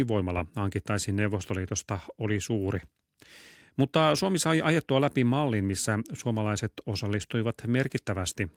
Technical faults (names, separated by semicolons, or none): none